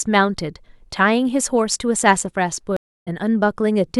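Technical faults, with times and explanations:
2.77–3.08 s, stream reconnect: the speech drops to silence for about 0.3 s, then picks up roughly 0.3 s further on, so a short stretch is simply skipped rather than delayed. The connection broke, the player sat silent while it re-established the link, then started a fresh decoder partway into a live stream. The gap and the jump forward come from resuming at the stream's current position, not where playback stopped.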